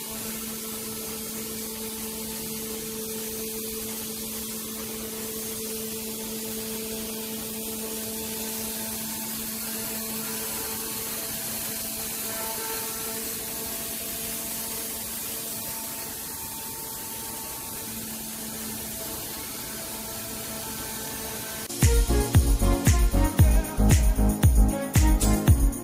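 No technical faults can be heard anywhere in this recording.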